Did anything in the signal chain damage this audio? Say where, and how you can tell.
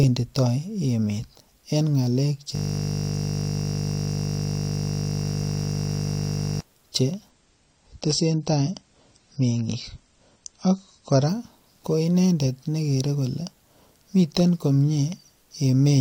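Yes. From 2.55 to 6.61 s the sound freezes into a steady 50 Hz buzz. A 20 ms slice repeats some 200 times, a system hang loop at the driver or buffer stage.

From 7.29 to 11.29 s the treble above 9 kHz abruptly vanishes without any gap. This is an adaptive stream at a lower bitrate, fitting a network-driven drop from 96 to 32 kbit/s AAC.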